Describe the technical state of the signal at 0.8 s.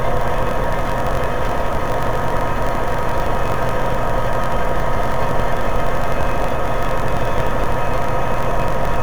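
At 0.8 s you're hearing interleaved audio read as planar, and it runs the whole clip, not just this moment. Each block of alternating left-right samples is being split in half, first half treated as left, second as right, so both play at half speed. Blocks are about 21.33 ms, which fits a 1024-sample block, repeating at 46.9 Hz. That's long enough to drop everything a full octave, 12 semitones down, doubled and choppy.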